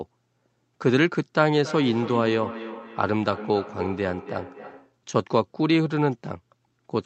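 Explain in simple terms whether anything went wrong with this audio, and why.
Feedback echo between two devices runs from 1.62 to 5.0 seconds. Two devices in the same room were on the call, and one played back what the other's microphone had sent. That microphone picked the sound up again and sent it round once more. Each device's echo canceller only removes what its own speaker plays, so the loop went unchecked. Each bit of speech returns roughly every third of a second, thinner and more ringing each time.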